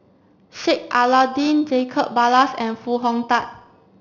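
Aliasing runs throughout: the speech was resampled from 16 kHz to 12 kHz unfiltered, so content above 6 kHz folds back roughly 20 dB below the signal, leaving gritty, metallic sibilants.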